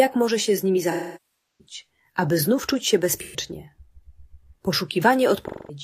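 AAC frame loss with concealment hits at 0.90–1.74 s, 3.14–3.37 s and 5.45–5.79 s: the decoder repeats the last spectrum, the short losses sounding like a smeared patch and the long first one decaying to a faint noise floor before fading back in, showing flat, blurred spectrogram bands.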